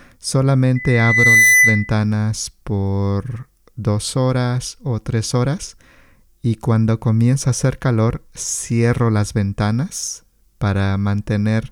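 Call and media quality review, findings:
Loudspeaker feedback squeal, 0.75–1.93 s: single 2 kHz tone swelling over roughly three-quarters of a second to a few dB above the speech. Mic re-capturing its own loudspeaker, loop gain above unity at 2 kHz. Spectrogram: bright horizontal line thickening. Waveform: envelope ballooning.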